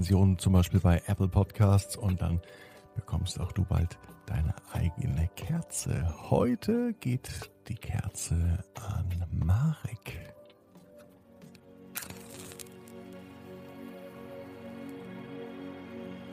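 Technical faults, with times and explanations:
No technical faults detected at any point in the audio.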